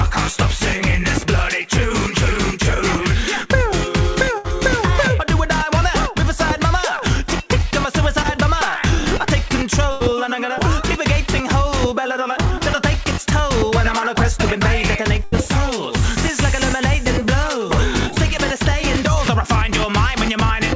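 At 4.38 s a burst of packet loss takes out about 60 ms. The receiver stretches the last sound into a fading buzz or hiss for about 62 ms. On a spectrogram this shows as smeared, repeated bands dimming before the audio jumps ahead. At 8.22 s a short concealed packet loss patches a 20 ms hole with extrapolated sound, heard as a brief wobble and seen as a thin blurred slice. Bursts recur at 9.92 s and 15.24 s, each about 80 ms, showing as flat smeared stretches in the waveform. Another short concealed loss at 12.58 s leaves a similar 20 ms smear. Throughout, nothing sits above 8 kHz, which fits a wideband call codec such as G.722.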